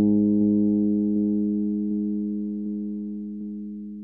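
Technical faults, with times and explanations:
0.41–0.66, 1.16–1.41, 1.91–2.16, 2.66–2.91 and 3.41–3.66 s: overlapping chunks. The audio was handled in 0.5 s chunks, each beginning 250 ms before the previous one ended, so a quarter-second of sound replays at every join, producing a regular stutter every 0.75 s.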